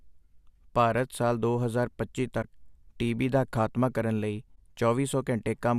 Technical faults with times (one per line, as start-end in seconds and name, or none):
2.42-2.45 corrupt frame concealed
4.55-4.58 corrupt frame concealed